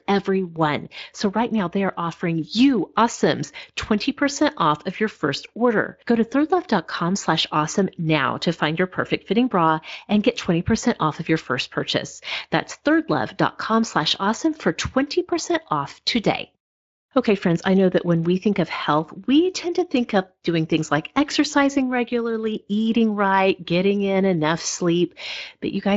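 No technical faults can be heard in the speech; it has gone through the Speex codec at what sounds like a fairly generous setting, with the codec working as intended.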